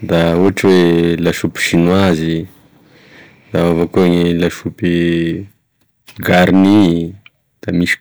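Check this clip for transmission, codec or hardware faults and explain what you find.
Hard clipping runs through the whole speech clip. The level is driven about 8 dB past full scale, so a small share of peaks are cut flat, adding harsh, buzzy crackle.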